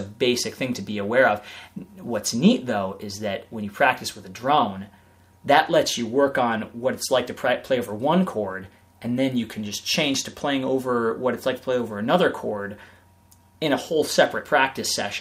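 Nothing stood out on listening; no technical problem could be heard anywhere in the clip.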